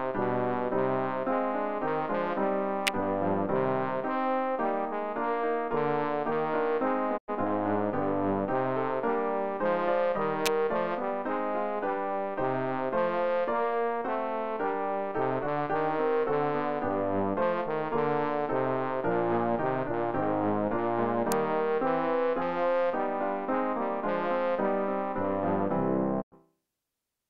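A sharp, dry snap sits on top of the sound at 2.87 s, and again at 10.46 s and 21.32 s. Each is over almost instantly and leaves the underlying audio intact. These are electrical switching spikes: a nearby switch, motor or static discharge most likely arced briefly, and the audio line picked up the burst as an added click.

At 7.16 s the sound fades out over about 20 ms, stays silent, and fades back in by 7.30 s. The same short hole recurs from 26.20 to 26.34 s. Both are digital broadcast dropouts. The receiver muted when incoming frames were lost or failed checking. Roughly 96 ms of programme is simply missing each time, which fits three lost frames, and the sound resumes once good frames return.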